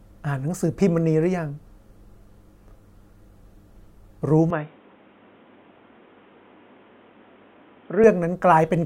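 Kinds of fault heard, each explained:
Input switched to a poorer device: at 4.5 s the speech turns dull and boxy, with nothing above 3.8 kHz and new background noise, likely from a narrower input, until 8.04 s.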